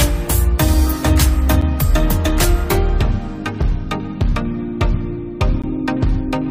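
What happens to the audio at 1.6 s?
At 1.61 s the sound drops out for about 8 ms in a gap between stream segments. The time stamps of two adjacent segments don't quite meet, so the player inserts silence to bridge the mismatch. The result is a brief, hard-edged hole with abrupt cut-off and resumption, heard as a small tick or stutter. Nothing is lost from the signal; the timeline is simply pushed back by those 8 ms, at a point that fits a boundary between 2-second segments.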